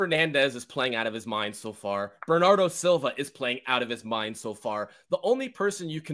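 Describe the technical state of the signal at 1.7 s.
At 1.7 s the speech signal is intact, with no audible fault at that point.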